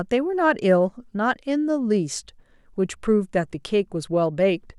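Nothing stood out on listening to this short speech recording.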